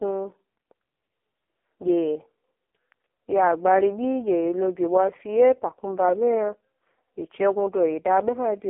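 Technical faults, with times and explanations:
Throughout, AMR narrowband mobile codec: the speech is squeezed into a thin phone band, roughly 250 Hz to 3.6 kHz with nothing above. It's heavily buzzy and synthetic, since the vocal-tract model gets very few bits per frame, which fits AMR-NB's lowest 4.75 kbps mode.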